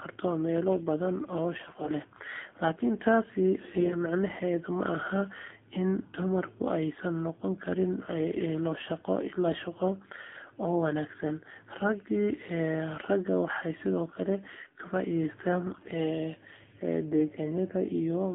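The whole recording passes through the AMR narrowband mobile codec. Everything sits between about 200 Hz and 3.5 kHz, so the speech sounds thin and boxed in. The coding damage is plain. Voices turn buzzy and synthetic, which fits a low AMR-NB mode around 7.4 kbps. At that rate, the vocal-tract model gets only a few pulses per subframe to drive it. Fine detail is lost.

AMR bit errors strike twice. The first runs from 1.58 to 1.93 s, and the second from 15.66 to 15.89 s. The lengths fit roughly 17 and 11 damaged 20 ms frames. On a weak link, a few percent of the less protected bits flipped, but the frames still passed their check. Pulses landed in the wrong places, and the finer gain and spectrum values went astray. The speech keeps its pitch and level but turns hoarse, scratchy and gargly.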